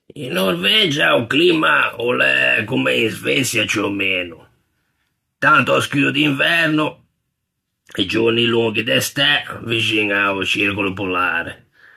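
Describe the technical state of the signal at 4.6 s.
At 4.6 s the speech shows generation loss, present throughout the clip. It sounds swirly, hollow and smeared, with blurred consonant attacks and nothing above 14 kHz. It was likely re-encoded about four times with a lossy codec, each pass adding fresh quantisation noise and spectral holes, consistent with AAC-LC at 64 kbit/s.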